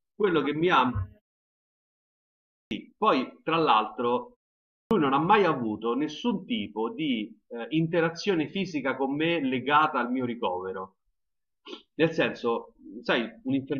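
At 2.59 s and 4.79 s there's a clipped start after a pause: the output device dozed through the silence and swallowed roughly 120 ms, so the sound snaps in abruptly.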